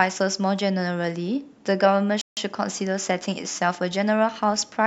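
At 2.21 s the speech cuts abruptly to silence and resumes at 2.37 s, a gap of about 157 ms. This is a Bluetooth stall, likely caused by radio interference delaying packets until the headphones' buffer emptied and playback waited for retransmissions. Unlike a dropout that discards audio or a concealment glitch that fills the hole with warbling, the gap is clean silence.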